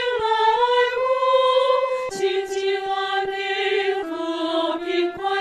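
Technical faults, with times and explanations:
Nothing technical goes wrong anywhere in this one, so there's nothing to flag.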